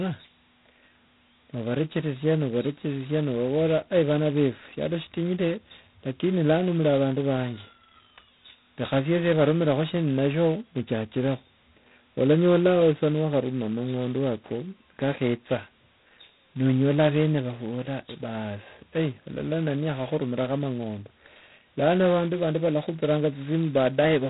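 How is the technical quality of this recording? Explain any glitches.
The recording is heavily degraded by G.726 ADPCM coding for its whole length. Rather than sending each sample, this codec sends a few bits describing how far the speech strays from an adaptive prediction. With so few bits, the leftover error becomes a harsh, rasping hiss that rises and falls with the speech level, pointing to the 16 kbit/s mode. Nothing above about 3.9 kHz survives. Unlike a steady, level-independent background hiss, or the warbly swirl of a low-bitrate perceptual codec, this roughness clings directly to the speech.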